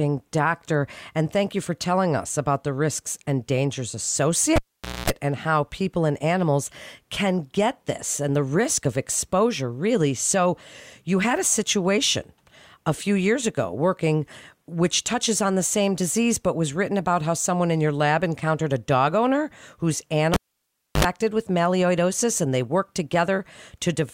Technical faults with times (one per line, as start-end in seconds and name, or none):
4.56-5.10 cable pulled and plugged in
20.34-21.05 cable pulled and plugged in